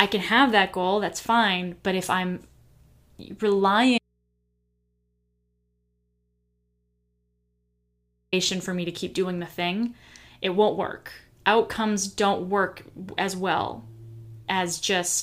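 A speech clip with an audio dropout to a faint residue from 3.98 to 8.33 s: the signal cuts out abruptly for about 4.3 s, leaving only mains hum roughly 50 dB down, then returns on "for me to keep". That likely points to a lost feed into a still-live input.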